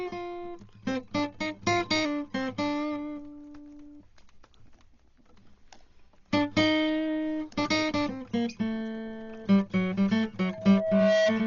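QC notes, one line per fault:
throughout: Dolby Digital compression, likely. The music is dull and band-limited, with nothing above 6.9 kHz, and the damage is heavy. Sustained tones carry a rough, fluttering noise around them. This fits AC-3 style coding at a very low bitrate, consistent with around 32 kbps. The encoder narrows the band and leaves many frequency lines without mantissa bits. The decoder then fills those empty lines with dither noise, which causes the flutter and grain around tonal content.
10.44 to 11.33 s: loudspeaker feedback squeal. A single tone at 643 Hz rises out of the music over roughly 0.7 s and peaks at about 5 dB above the programme level before the clip ends. The microphone is picking up the loudspeaker it feeds, and at 643 Hz the loop gain exceeds one. That frequency reinforces itself on each pass around the loop, so it swells steadily into a sustained squeal rather than appearing all at once.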